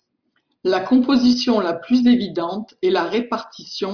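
No technical faults are audible.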